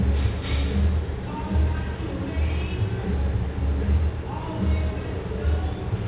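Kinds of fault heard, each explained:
No faults heard: the sound arrives over a normal WebRTC call path using G.711 mu-law at 64 kbps, which limits the band to nothing above 4 kHz.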